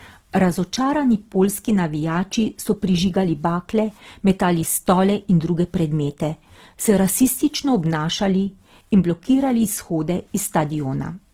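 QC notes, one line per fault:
Throughout: likely Opus compression in its music mode. The speech is plainly grainy and rough rather than swirly, because bit-starved bands are refilled with folded or noise content. Bandwidth stays full, up to about 20.2 kHz, and the damage fits a low rate near 16 kbps.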